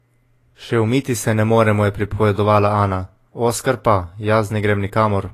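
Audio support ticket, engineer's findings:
Speech, full clip. Hard spectral ceiling at 14.1 kHz, plus low-bitrate artefacts despite a high-bitrate MP3 file. Likely low-bitrate audio saved at a high bitrate: the damage points to a first encode near 34 kbit/s, perhaps Vorbis, then re-encoded as MP3 around 307 kbit/s. The second pass added almost nothing and could not restore the lost detail. Differs from a plain low-bitrate file: the file's bitrate does not match the heard quality.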